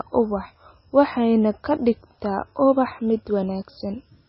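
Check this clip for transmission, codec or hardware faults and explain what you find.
One codec fault runs through the whole clip. Throughout, nothing remains above about 5.6 kHz, and the speech has a watery, swirling texture with smeared onsets. The likely cause is heavy MP3 compression at a very low bitrate, near 17 kbps. The starved encoder cut the treble and zeroed weak frequency lines that flicker between frames.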